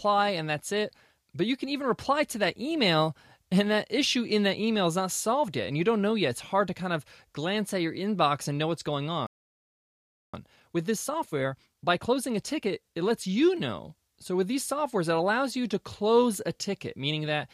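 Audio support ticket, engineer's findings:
Playback stall at 9.27 s: speech cuts out mid-flow and goes silent for 1.07 s, picking up again at 10.34 s. Likely the player's buffer ran dry or its output thread got blocked, so nothing was fed out until recovery.

Time-compressed catch-up right after, 10.34 to 13.34 s: speech comes out hurried at 1.15x, pitch unchanged. The player is trimming its backlog by snipping out small chunks and cross-fading the joins to get back on schedule.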